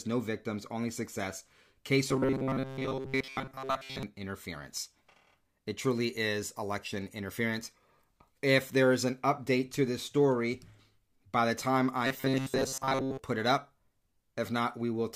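From 2.09 to 4.03 s and again from 12.07 to 13.19 s, the speech turns into a rigid metallic buzz fixed at 133 Hz, the robotic sound from repeated short buffers. It is likely caused by late-arriving audio being filled with repeats of a 7.5 ms slice, with most of the real signal skipped. Unlike a dropout or a stutter, the sound never goes silent and still roughly follows the speech.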